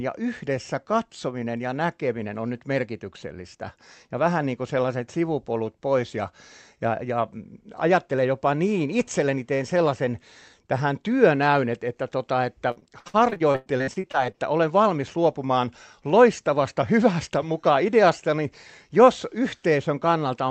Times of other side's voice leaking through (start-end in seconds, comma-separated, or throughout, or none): none